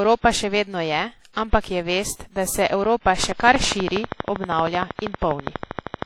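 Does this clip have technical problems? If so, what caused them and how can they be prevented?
Yes. Throughout the speech there is a washy, ringing quality, with hiss that swells and fades along with the voice. That points to heavy transform-codec damage, likely WMA encoding at a low bitrate around 32 kbps. Unlike clock jitter, it smears sound over time rather than adding a fixed rough edge. Encode at a higher bitrate or keep an uncompressed master.

Periodic clock jitter, at roughly 2 kHz, runs through the whole clip. Interference modulates the converter clock and puts sidebands around every component, heard as a metallic roughness that disappears in pauses, unlike codec hiss. Prevent it with a clean, well-isolated clock and power supply.

Pre-echo appears at 1.33–1.37 s, just after "še vedno je". Codec noise spreads about 37 ms ahead of a sharp attack, so a brief hiss precedes it and the onset softens. 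Unlike a click, it leads into the attack instead of standing alone. Use shorter transform blocks or a higher bitrate.

A train of clicks runs from 3.24 to 6.03 s: about forty regular pulses at 12.6 per second, roughly 15 dB above the signal, audible in pauses too. The steady rate separates it from random crackle, and the likely cause is interference or a faulty connection. Check cables, grounding and nearby equipment.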